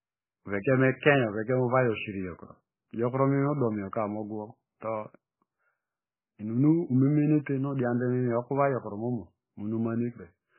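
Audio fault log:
Throughout: MP3 compression, heavy. Nothing is heard above 3 kHz, so the speech loses its sibilance and air and sounds dull and band-limited. The remaining band has a watery, swirling texture, with weak spectral detail flickering in and out between frames and consonant onsets smeared. The likely cause is an MP3 encoder starved of bits, which fits a bitrate of only about 9 kbps. It discards the treble at a fixed cut-off and zeroes low-level frequency lines that it judges inaudible.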